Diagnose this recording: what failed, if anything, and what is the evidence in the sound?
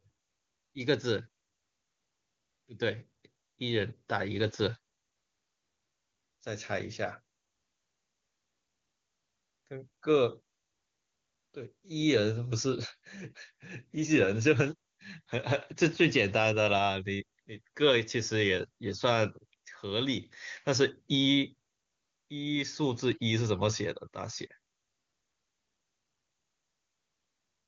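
Nothing here has failed: the speech is carried by the AMR wideband (HD Voice) codec, with content stopping at about 7.4 kHz as that codec's band limit dictates, and any coding damage is faint at most, which points to one of its highest rates, likely the 23.85 kbit/s mode.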